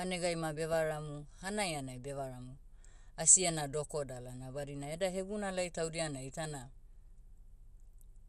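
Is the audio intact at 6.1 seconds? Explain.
No. The speech at 6.1 s, as throughout, is likely damaged by MP2 compression short of bits, fitting about 80 kbps. Upper sub-bands drop out and coarse quantisation leaves it dull and gurgling.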